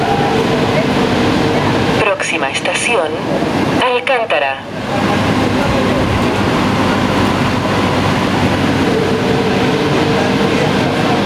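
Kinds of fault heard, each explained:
gain pumping: the gain swings by about 20 dB, pulled down under each loud sound, likely from excessive input gain driving a fast limiter.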